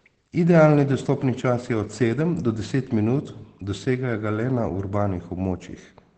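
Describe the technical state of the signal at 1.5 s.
At 1.5 s, as across the whole clip, Opus voice compression in SILK wideband mode, consistent with about 12 kbps, cuts everything above 8.6 kHz, leaving the speech muffled and hoarse.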